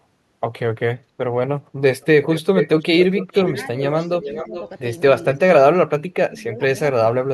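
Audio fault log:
2.01–2.06 s, 2.29–2.82 s, 2.99–3.66 s and 4.00–4.64 s, echo leak: a delayed copy of the speech returns 417 ms late, likely from a far-end loudspeaker path the echo canceller failed to cancel. Its level varies, from about 35 dB below the speech up to about 5 dB below. Unlike room reverberation, it is a distinct, separated repeat rather than a smooth tail.
3.76–4.54 s and 5.98–7.21 s, speech suppressed in double talk: while the far side's sound plays on the loudspeaker as this side talks, the talker's own speech is pulled down rather than a copy being added. The first dip is shallow, about 5 dB over roughly 0.4 s. The second cuts deep, about 30 dB over roughly a second, and likely comes from the canceller treating both voices as echo.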